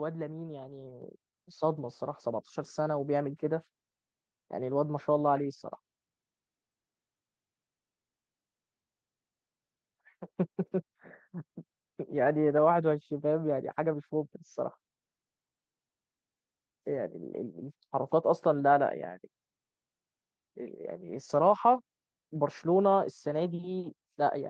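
At 1.02 s the microphone volume is stepped up: the call software judged the input too quiet and raised the device gain by about 7 dB at once, so speech and room noise jump louder together, through the Opus-coded call path band-limited near 12 kHz.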